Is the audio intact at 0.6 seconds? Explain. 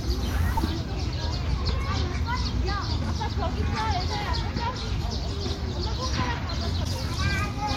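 No. Damaged data in a compressed stream at 0.54 to 0.59 s makes the decoder misread frames and resync, giving a brief chirp or blip.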